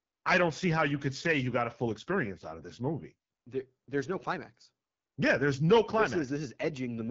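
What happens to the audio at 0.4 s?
At 0.4 s the speech sounds rough and raspy, with a dull, boxed-in top and nothing above 7.4 kHz. That is the AMR wideband (HD Voice) codec, and the damage runs through the whole clip. It rebuilds speech from a pulse-excited model of the vocal tract up to 6.4 kHz and fills the band just above with shaped noise. The coarseness here fits its low 8.85 kbit/s mode, where too few bits remain to model the voice cleanly.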